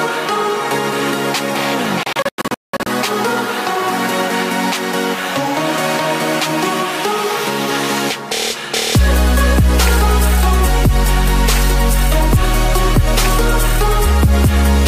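A digital broadcast dropout runs from 2.03 to 2.87 s. The receiver stopped getting frames it could decode, either because the signal vanished or because frames failed their checksum, so it muted until valid data resumed. Across those 0.83 s the sound falls into several short holes of silence totalling about 0.51 s, the longest lasting 0.19 s, which suggests around sixteen lost frames. Whatever was transmitted during the gaps is gone, and the audio returns further along.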